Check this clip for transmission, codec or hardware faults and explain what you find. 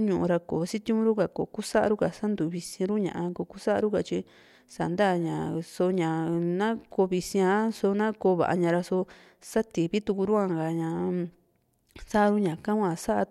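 No transmission, codec or hardware faults can be heard anywhere in the recording. There is nothing to report.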